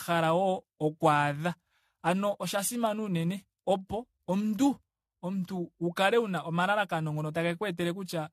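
From start to finish the speech carries generation loss: a swirly, smeared, hollow quality with softened consonant attacks, likely from around seven successive AAC-LC encodes at a rate that fits 64 kbit/s, each pass requantising on a shifted frame grid and compounding noise and spectral holes.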